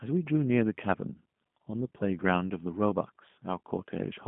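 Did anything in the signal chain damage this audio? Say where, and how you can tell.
Yes. The damage comes from the codec stage and runs through the whole speech clip. It is G.729 coding, and the sound fits the 8 kbit/s G.729A variant. There is nothing above 3.8 kHz, and the band sits roughly between 150 Hz and 3.5 kHz. The codec rebuilds each 10 ms frame from a vocal tract filter, a pitch predictor and a few pulses. That model leaves the speech plainly rough and synthetic.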